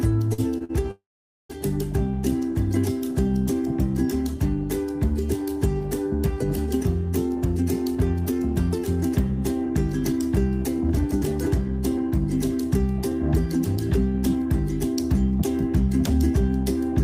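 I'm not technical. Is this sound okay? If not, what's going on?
No. There are three kinds of trouble, all from audio arriving over a network unevenly.

Near the start are three short stalls from a late packet, at 0.33 to 0.40 s, 0.58 to 0.62 s and 0.64 to 0.71 s. Each time a piece of audio showed up late, so the player held the last sound for a moment, about 46, 24 and 47 ms, with a faint buzz or dip. Then it carried on from the same spot. Nothing is lost; the sound just hangs briefly.

Right after that comes a call audio freeze, from 0.91 to 1.51 s. The sound stretches into a fading buzz or hiss and then goes quiet for about half a second before picking up exactly where it stopped. This is likely the same network hold-up, only longer. What sets it apart from the short stalls is that audible stretch of near-silence, not just a held sound.

Later there are two stretches of jitter buffer speed-up. 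The player had built up extra waiting audio and trimmed it away by snipping out many tiny slices. From 7.29 to 8.79 s everything runs about 9% fast and sounds hurried. From 9.66 to 15.03 s it runs only about 2% fast, which is subtler. Each stretch drops roughly 0.15 seconds. Unlike the stalls, nothing pauses here; the sound rushes ahead at the same pitch.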